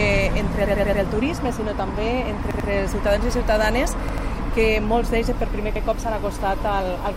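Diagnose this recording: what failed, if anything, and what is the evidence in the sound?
Sound stutters with a hard join at each restart: four extra plays at 0.65–1.02 s, two each at 2.51–2.69 s and 4.09–4.27 s, one at 5.76–5.85 s. Each 93 ms slice fits a 4096-sample buffer: a repeated buffer, the driver replaying its last block when new audio arrived late.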